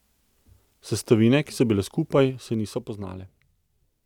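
From 2.18 to 3.56 s there's zipper noise: the speech gets pulled down by roughly 10 dB, but in unsmoothed 2 dB jumps, around four a second. Each jump leaves a small click, so you hear a faint ticking riding on the voice while it drops.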